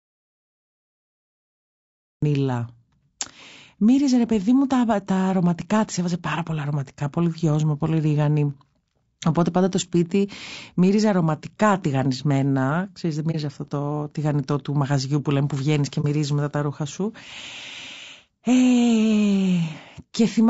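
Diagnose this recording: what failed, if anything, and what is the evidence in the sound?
Audio dropout to silence, 0 to 2.23 s: the speech starts in silence with no room tone, likely from a lost input or link upstream of the recorder.

AAC frame loss with muting, at 13.31 and 16.01 s: brief dips of about 40 to 50 ms. The first falls just before "αυτό το τηγανιτό του", the second between "λέμε που βγαίνεις και" and "μετά τα ρούχα σου". The decoder zeroed a missing frame of roughly 30 ms and window overlap faded the edges.

Low-delay AAC compression throughout, likely AAC-ELD at the codec stage: the speech is plainly rough and grainy, with noise between harmonics. The short frames and the bitrate, which fits around 32 kbps, starve the harmonic detail.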